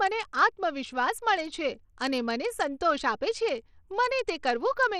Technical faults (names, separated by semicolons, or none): Bluetooth SBC compression